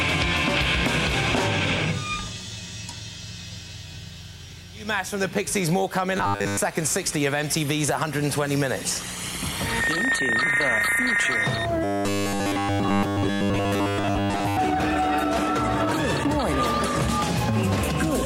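A rigid, metallic 100 Hz buzz covers 6.17 to 6.59 s and 11.84 to 14.57 s. This is robotic sound from repeated short buffers, likely a 10 ms chunk replayed while most real audio is skipped.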